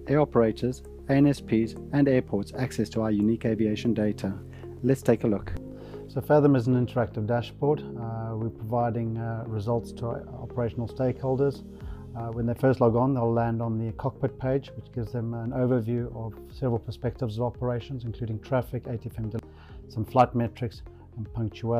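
At 19.39 s the audio has damaged data in its compressed stream: the decoder loses frame sync and resyncs, giving a brief glitch.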